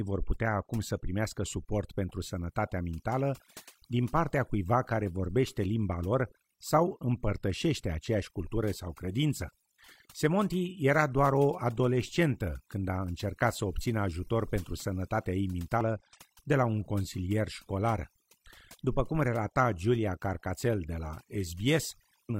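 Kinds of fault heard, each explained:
overdone noise removal: Throughout the speech, a noise reducer pushed too hard is cutting individual frequency bands down or out wherever they sit near its noise estimate. The background drops and breaks up into twinkling specks, and quieter parts of the voice are removed along with the noise. A simple noise gate would mute or open the whole signal at once. Here single bands switch independently, which gives the glittery texture.
damaged data in a compressed stream: Two short blips come from the decoder hitting corrupted compressed data, misreading the frames and hunting for the next valid header before it can resume. The first lands at 15.81 s, right after "ajutor pentru sănătatea ei". The second runs from 22.25 to 22.30 s, near the end. This fault differs from a clean dropout, where audio simply disappears, and from packet-loss concealment, which smooths the gap over.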